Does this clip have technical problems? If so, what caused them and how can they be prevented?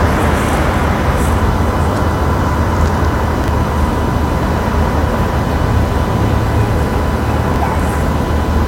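Yes. Chunks out of order occur at 3.44–3.48 s and 7.48–7.56 s, where a 20 ms chunk plays one chunk late, then three late, giving a brief jumbled stutter at the hard joins. Unlike a dropout, no audio goes missing. Buffering and reordering chunks by sequence number before playback prevents it.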